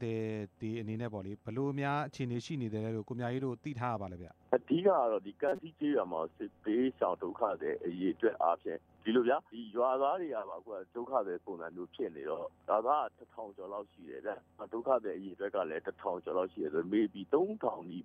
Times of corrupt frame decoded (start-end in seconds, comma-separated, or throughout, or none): 5.49-5.59